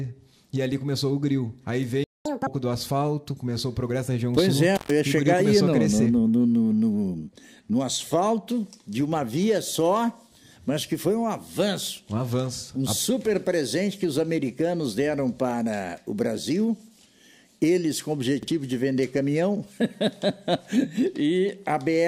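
A playback stall at 2.04 to 2.25 s cuts the sound off mid-flow for about 210 ms of silence, likely because the player ran short of data or was blocked.

Catch-up at higher speed follows from 2.25 to 2.47 s, as the player runs its backlog at double speed, lifting the pitch by about ten semitones before settling back.

Intermittent contact at 4.76 to 4.91 s drops the sound for about 120 ms with crackle at each edge, as a loose connection briefly opens the line.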